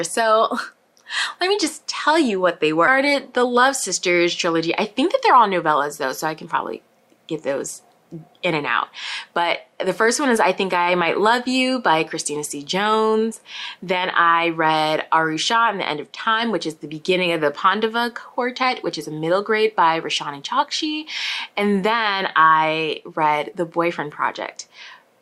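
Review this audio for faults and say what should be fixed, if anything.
At 2.87 s there is a skip ahead. About a second of sound is missing. Playback jumps straight forward with no gap and no fill. The audio before and after the jump is joined almost directly. A stretch was dropped while later audio was already waiting, either in transit or when the jitter buffer overflowed. Sizing the jitter buffer to absorb delay bursts without overflowing would prevent this.

Right after the jump come two episodes of jitter buffer speed-up. From 2.98 to 3.62 s the sound runs at 106% speed. From 4.13 to 6.55 s it runs at 105%. Pitch stays the same, but the pace feels hurried. The buffer held more audio than its target. The receiver trimmed short pitch-period pieces repeatedly, roughly 40 ms in the first episode and about a tenth of a second in the second. Steadier packet delivery or gentler buffer adaptation would prevent this.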